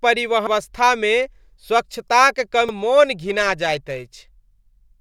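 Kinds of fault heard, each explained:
Damaged data in a compressed stream: corrupted frames make the decoder lose sync, giving brief glitches at 0.47 s and 2.69 s.
Periodic clock jitter: from 3.26 s the converter clock wobbles at around 1 kHz, adding sidebands that roughen the speech metallically. Unlike hiss, it vanishes in pauses.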